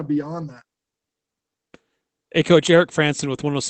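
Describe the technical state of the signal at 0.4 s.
Around 0.41 to 0.43 s the speech turns briefly rougher and noisier, with no gap. This is a lost packet rebuilt from error correction: one 20 ms packet went missing, and the decoder played the lower-bitrate Opus copy carried in the following packet in its place.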